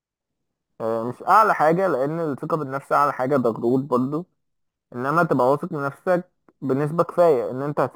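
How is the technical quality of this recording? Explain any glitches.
The recording has one technical fault, crude rate conversion, present for its entire length. Samples were dropped without filtering, consistent with a 48 kHz to 44.1 kHz change. The repeating timing error adds a gritty, inharmonic fizz around 30 dB below the speech, following louder, brighter syllables. On a spectrogram, faint stray lines appear between the speech harmonics.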